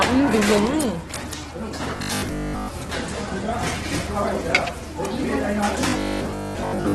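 A recording of everyday sounds, heard through heavy Opus compression for its whole length. Nothing is present above about 12.1 kHz, and the texture is rough and grainy rather than swirly, with tonal parts turning noisy. That points to the music (CELT) mode at a very low bitrate, likely around 12 kbps, where the encoder keeps each band's energy but fills starved bands with folded or noise-like content instead of leaving gaps.

Robotic sound from repeated short buffers appears twice: from 1.96 to 2.68 s, and again from 5.81 s to the end. In both stretches the audio becomes a rigid, metallic buzz locked at 50 Hz, which fits a short stretch of about 20 ms being played over and over. Most of what is heard there is repeated material rather than new audio. The likely cause is audio arriving too slowly, so the playback side loops its last buffer while the real signal is skipped.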